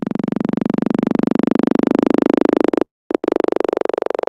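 A clip of everyday sounds, where at 2.85 s the last sound briefly carries on as a buzz or hiss, then drops to silence for about 230 ms before resuming at 3.12 s with nothing skipped. This call audio freeze is likely from packets held up in transit, so the jitter buffer ran dry and the receiver filled about 250 ms before continuing from where it stopped. Just after, from 3.18 to 3.25 s, a sound is held too long with a slight buzz or dip: a short stall from a late packet, where the last sound was stretched by about 50 ms until the packet arrived.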